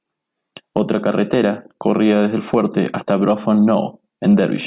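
No technical faults can be heard anywhere in the speech recording. Nothing in the signal points to a problem at any moment of it.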